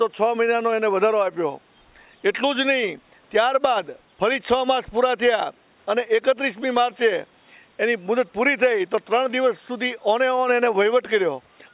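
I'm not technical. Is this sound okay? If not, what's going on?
Yes, the sound is in good technical shape, with nothing going wrong in it that you'd need to worry about.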